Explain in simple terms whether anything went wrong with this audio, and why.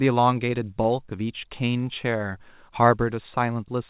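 A brief smear or wobble at 0.82–0.86 s: short concealed packet loss. About 20 ms of call audio arrived too late, so the receiver patched the gap by extending the preceding sound.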